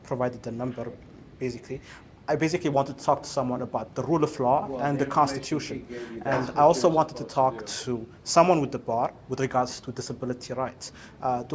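No technical faults can be heard anywhere in the clip.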